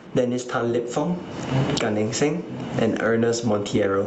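Gain pumping runs throughout the speech: the gain swings by around 25 dB, likely from excessive mic gain hitting a fast limiter, with the audio band-limited to 8 kHz.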